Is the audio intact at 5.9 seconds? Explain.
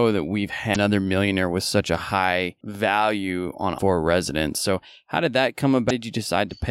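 No. From 5.87 to 5.91 s, about 40 ms, this speech clip has damaged data in a compressed stream. Part of the encoded data there is corrupt. The decoder cannot read those frames properly and loses its place. It then scans ahead for the next valid frame header and resumes. The result is a brief chirp or blip.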